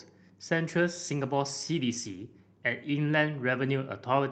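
From 0.68 s to 2.47 s the speech turns rough and watery, with the top end dulled, a call bitrate drop. The sound points to the Opus encoder falling from about 64 kbps to roughly 23 kbps as the bandwidth estimate collapsed, coding more coarsely before recovering.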